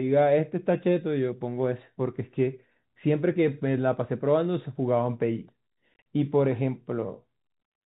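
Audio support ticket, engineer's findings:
Packet loss filled with silence, 5.94 to 6.05 s: speech chopped by hard-edged dropouts, about 80 ms missing over 120 ms, longest gap 40 ms. Gap sizes fit 10 ms packets. Waveform shows flat silent segments; spectrogram shows blank full-band columns.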